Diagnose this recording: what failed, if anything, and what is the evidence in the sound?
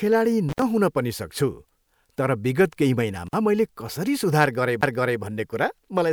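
Analogue wiring fault, intermittent contact: the speech drops out twice with crackle at both edges and faint hiss in the gap. The first break runs from 0.49 to 0.62 s, just before "पनि सक्छु", with the line open for about 70 ms. The second runs from 3.27 to 3.34 s, between "तर विगत केही" and "मैले कसरी", open for about 48 ms. A loose plug or cable conductor is briefly losing contact, and the crackle is the connection scraping as it breaks and remakes.

Playback fault, CD skip: at 4.81 s, right after "मैले कसरी", there is a very brief mute, and the speech then resumes from a different point rather than continuing where it left off. The laser pickup has jumped to another turn of the disc's spiral, from a knock or a flaw in the disc. The player mutes during the jump and then plays on from wherever the pickup landed.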